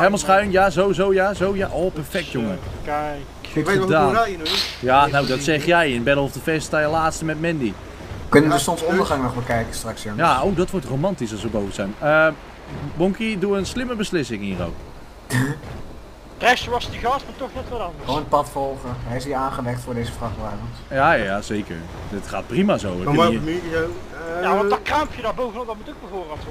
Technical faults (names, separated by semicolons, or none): none